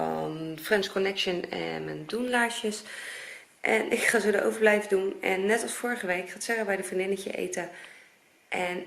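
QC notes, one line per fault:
0.0–2.0 s, adaptive stream starting at a low bitrate: dull, smeared treble and stronger codec artefacts, then an abrupt, gapless lift in clarity as the player switches to a higher-quality rendition, consistent with roughly 24 kbit/s rising to 64 kbit/s.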